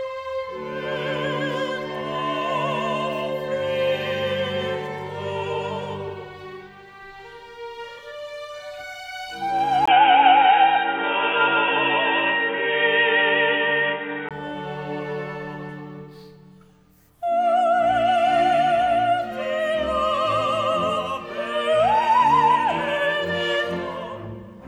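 From 9.86 s to 14.31 s the audio turns dull and boxy, with nothing above about 3.8 kHz, a level shift of a few decibels, and a new background noise floor sitting roughly 35 dB below the signal. A silent gap of about 20 ms at 9.86 s marks the change, and the full bandwidth returns at 14.31 s. The likely cause is an input switched to a poorer device for that stretch, such as another microphone or a headset call profile.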